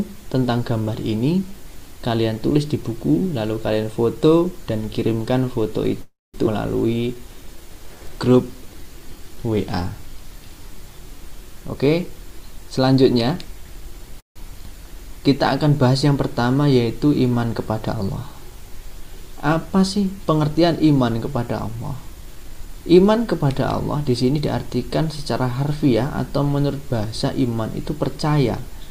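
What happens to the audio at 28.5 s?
Nothing goes wrong at 28.5 s; the audio plays through that moment intact.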